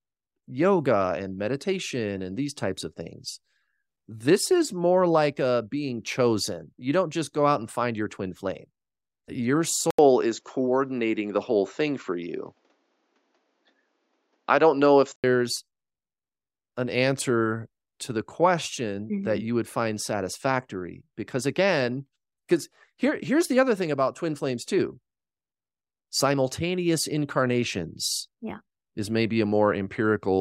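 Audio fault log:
9.91 to 15.24 s, input switched to a poorer device: after an 80 ms gap the speech goes dull, with nothing above 7.6 kHz, a level shift of a few dB and a faint new noise floor, likely because recording jumped to a narrower-band device before switching back.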